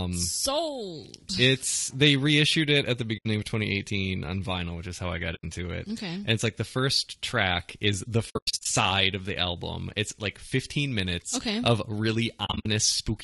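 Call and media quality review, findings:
Low-delay AAC compression, throughout: speech rough and grainy, noise between harmonics, synthetic-sounding top band. Likely AAC-ELD near 32 kbps; short frames resolve pitch harmonics poorly.

AAC frame loss with muting: soft-edged dropouts at 3.17–3.26 s and 5.35–5.44 s (80 ms each), then scattered gaps over 8.29–8.66 s (longest around 100 ms) and 12.45–12.66 s. Lost frames zeroed; overlapping windows fade out and in.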